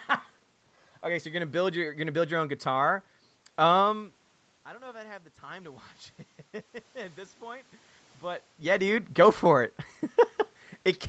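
From 4.65 to 5.93 s the voice and the room noise swell together by about 4 dB: automatic gain rising. After the talker moved away around 4 s, the input fell about 20 dB, and the gain control slowly raised its level to compensate.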